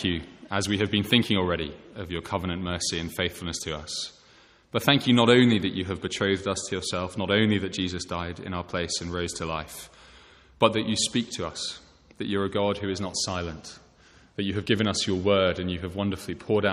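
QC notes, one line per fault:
No audible faults found in this clip.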